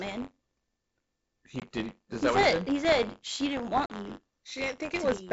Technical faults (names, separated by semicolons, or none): buffer tearing; packet loss on an ADPCM call